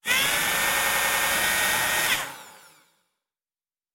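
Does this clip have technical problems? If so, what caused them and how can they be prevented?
Yes. From 0.74 to 1.30 s there is a system hang loop: the computer or driver stalled while the audio hardware kept replaying its ring buffer, so one 93 ms slice repeats six times at about 10.8 Hz, a machine-gun stutter that fits a 4096-sample buffer. About half a second of real audio is lost. A waveform shows identical copied segments; a spectrogram shows the same block stamped side by side at regular intervals. Running audio on a high-priority real-time thread with stable drivers prevents it.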